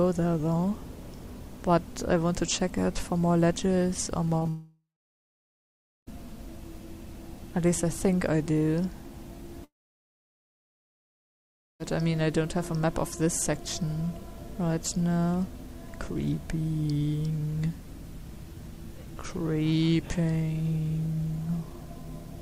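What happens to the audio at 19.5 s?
Nothing goes wrong at 19.5 s; the audio plays through that moment intact.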